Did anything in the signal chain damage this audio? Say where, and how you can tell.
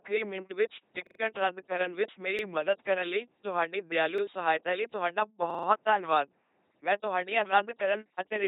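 Yes. The whole clip is a buzzing, mechanical voice with hissy patches and nothing above 3.8 kHz. That points to the codec stage: an LPC-10 vocoder at 2.4 kbit/s. It rebuilds speech through a ten-pole filter driven by either pulses or noise, never a blend.

Playback also stutters, with hard joins, at 1.07–1.20 s (after "ਮਿੰਟ ਵਿੱਚ", three extra plays), 2.39–2.43 s, 4.18–4.22 s and 5.50–5.68 s (four extra plays). Each repeat is about 43 ms long, which fits a 2048-sample buffer. This is a repeated buffer at the driver stage: the device replayed its last block when new audio arrived late.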